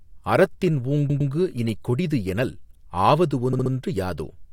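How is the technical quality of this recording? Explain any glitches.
The recording has two stutters from repeated frames. At 1.09 to 1.30 s, a 107 ms block of compressed frames was sent again and played twice more, a short stutter. At 3.52 to 3.71 s, a 64 ms block repeats three extra times, a faster stutter. Together they make the speech about 0.4 s longer.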